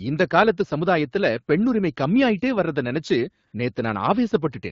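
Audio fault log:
3.47–3.53 s, AMR comfort noise: for 60 ms no speech frames were sent, and the receiver filled the gap with synthetic noise, so the real background briefly turns into smooth, steady hiss. A spectrogram shows a flat, featureless band, and the waveform shows an even, low envelope.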